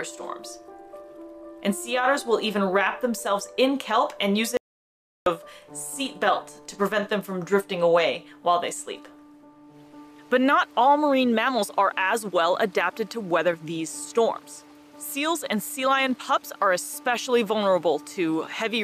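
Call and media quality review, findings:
Audio dropout to silence, 4.57–5.26 s, about 0.69 s lost. Input path likely interrupted (device disconnect, link failure or mute) while the encoder kept writing silence. Sound cuts off abruptly, then silence with no room tone, then an abrupt return.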